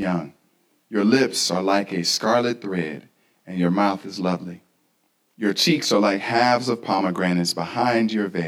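Speech with channel delay (comb filtering) throughout: one channel lags by around 20 ms, so summing them cuts fixed, evenly spaced notches from about 20 Hz upward, giving a rough, slightly doubled sound that stays put rather than sweeping like flanging.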